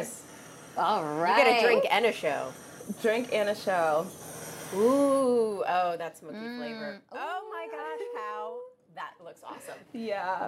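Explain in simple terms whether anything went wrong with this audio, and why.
From about 4.96 to 6.4 seconds there's a fast ticking or zipping sound riding on the audio while it gets noticeably quieter. That's zipper noise. Instead of easing the volume down in one continuous glide, this drop was made in many tiny jumps, roughly fifty a second. Each jump leaves a small click, and that rapid run of clicks is what you hear as the zipper.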